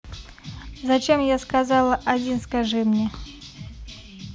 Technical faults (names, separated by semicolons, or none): none